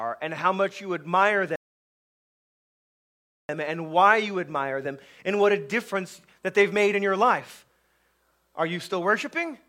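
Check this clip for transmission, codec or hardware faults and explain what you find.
There is one fault, a rebuffering stall. From 1.56 s to 3.49 s, right after "how much you admire", the sound drops to silence. The playback buffer ran dry and waited for more data, then resumed exactly at "and why you admire", adding about 1.9 s. Unlike a dropout, nothing is skipped.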